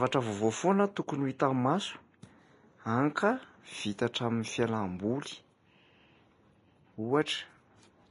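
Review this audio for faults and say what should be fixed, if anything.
Throughout the speech there is plainly audible codec damage, with nothing above 10.5 kHz and a hissy, grainy treble, which points to Vorbis compression at a low rate, likely one near 30 kbps. At that rate the encoder keeps a smooth spectral envelope but quantises the high-frequency residue so coarsely that fine detail is replaced by noise of similar energy, roughening tones and softening consonant onsets. To prevent it, encode at a higher quality setting or keep a lossless master.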